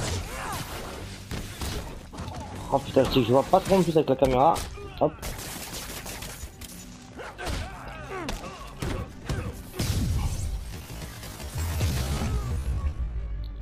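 From 10.62 s to the end, the pace suddenly drops to roughly half speed, running at about 0.53 times the original rate while the pitch stays exactly where it was. The slowed audio drags, as if each moment were being drawn out. This is a time-stretched section, likely the result of software lengthening the passage to fill a fixed duration by repeating short slices of the sound to preserve pitch.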